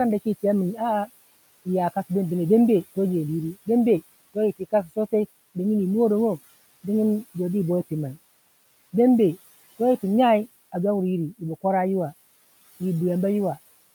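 From 4.59 to 5.13 s, speech cut by the noise suppressor dips parts of the speech by about 16 dB, around a tenth of a second in all, leaving swallowed sounds and thinned, faint waveform and spectrogram gaps.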